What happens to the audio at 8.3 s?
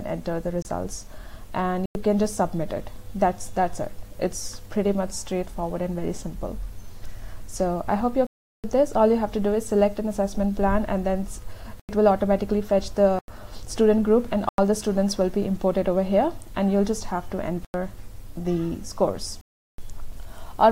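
A block of digital silence runs from 8.27 to 8.64 s: the sound drops out abruptly for about 0.37 s, a short hole where an unfilled buffer or invalid calculation left zeros.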